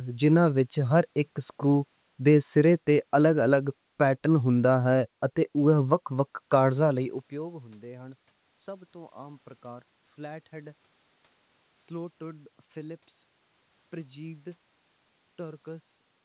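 Speech clip; no technical faults can be heard.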